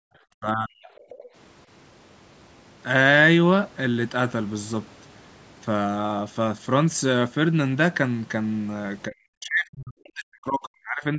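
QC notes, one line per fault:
0.0–0.12 s, background gated by the echo canceller: while the loudspeaker was playing, the echo canceller clamped the microphone down by about 40 dB, so the room sound at the very start of the clip drops out for roughly a tenth of a second and then returns as the canceller releases.
0.4–0.89 s and 9.09–11.18 s, speech suppressed in double talk: with both sides talking, the canceller likely could not tell the talker from the loudspeaker echo and turned everything down, up to about 40 dB. The speech dips and breaks up for about half a second early on, then for roughly the final two seconds.
0.96–1.24 s, other side's voice leaking through: the canceller likely left some of the far-end loudspeaker signal in the microphone path, so a second, faint voice about 25 dB below the talker comes through briefly. The call's microphone processing holds content below 8 kHz.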